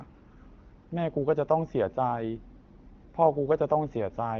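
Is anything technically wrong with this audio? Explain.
No, there's nothing wrong to point to here; the speech has simply been carried through an AMR wideband (HD Voice) codec at 12.65 kbit/s, which is a rate that codec handles comfortably.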